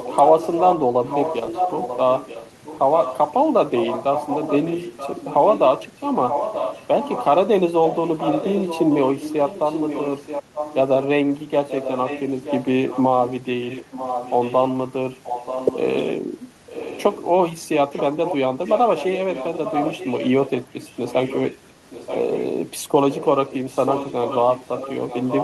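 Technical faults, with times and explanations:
0 to 3.18 s, 3.75 to 7.25 s, 7.86 to 11.06 s, 11.68 to 14.63 s, 15.23 to 15.79 s, 16.68 to 17.26 s, 17.93 to 22.46 s, 23.1 to 25.43 s: echo leak. A copy of the voice returns 932 ms late, about 5 to 15 dB quieter, likely leaking through a loudspeaker-side echo canceller.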